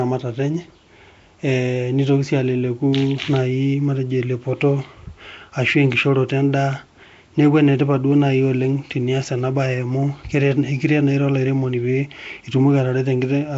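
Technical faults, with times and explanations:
Throughout, Nellymoser compression: rough, hissy, underwater-sounding speech with nothing above 7.7 kHz, likely the Asao codec near 32 kbps filling starved bands with noise.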